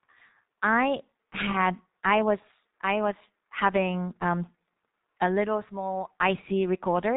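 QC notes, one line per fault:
throughout G.723.1 codec: spectrogram empty above 3.8 kHz; slowly updated 30 ms frames smear consonants into muffled, hoarse speech, fitting a roughly 6 kbit/s stream.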